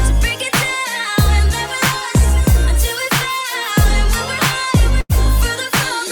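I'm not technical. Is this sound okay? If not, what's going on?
No. At about 5.01 to 5.12 seconds the sound briefly smears into a held, fading continuation of the last sound, then jumps ahead with a bit missing. That's a burst of packet loss: a run of audio never arrived in time, so the player stretched the last sound for about 90 ms, and about 60 ms was lost.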